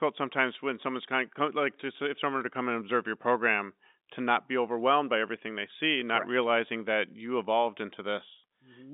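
No technical faults occur anywhere in this speech, which comes over a G.711 telephone line working as it should.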